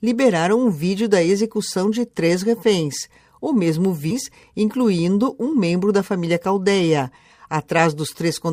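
At 4.10 to 4.13 s the sound jumps abruptly forward. A brief blip marks the join, lasting only a few hundredths of a second. The audio before and after does not connect. This is a stream segment skipped. The likely cause is a segmented stream in which one chunk failed to load. The player then carried on with the next chunk. The missing stretch never plays.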